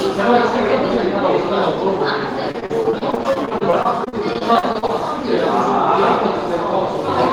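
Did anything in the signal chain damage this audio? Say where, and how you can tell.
Yes, at the network stage: repeated packet loss (robotic sound) from 2.51 to 4.90 s. Packets keep going missing, each gap up to 40 ms gets patched by stretching the last sound, so roughly a fifth of that stretch turns choppy.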